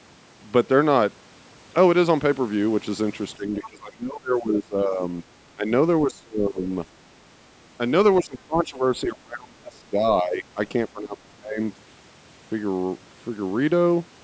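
From 3.36 to 5.02 s the speech sinks in patches, at its worst about 25 dB down. Shorter dips of about 15 dB follow at 5.22 to 5.27 s and 5.55 to 5.7 s. Deeper cuts, reaching about 30 dB, come at 6.05 to 6.62 s, 8.21 to 8.84 s, 9.04 to 10.58 s and 10.88 to 11.6 s. This is speech suppressed in double talk, likely an echo canceller that could not separate the talker from the far-end echo and turned both down.

Within the first dip, at 3.63 to 3.69 s, a brief scrap of a second voice surfaces about 20 dB below the speech. This is the other side's voice leaking through, likely loudspeaker echo that the canceller failed to remove from the microphone signal.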